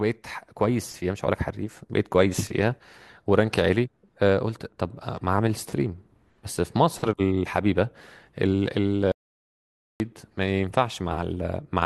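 At 9.12 s the speech cuts out abruptly and the track falls to complete silence until 10.0 s, an audio dropout to silence lasting about 0.88 s. No room tone or hiss remains in the gap, so the input was likely lost while the recorder kept writing silence. Whatever was said there is gone. On the waveform this is a flat stretch; on a spectrogram, a blank vertical band with hard edges on both sides.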